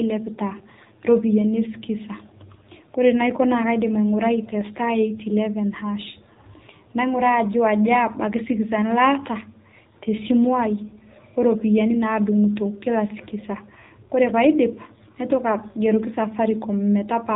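AMR narrowband mobile codec damage runs throughout the speech, plainly audible from start to end. Nothing above about 3.8 kHz survives, so the voice sounds boxed-in and telephone-like, and the sparse pulse coding gives it a buzzy, synthetic edge that fits a low AMR-NB mode near 7.4 kbps.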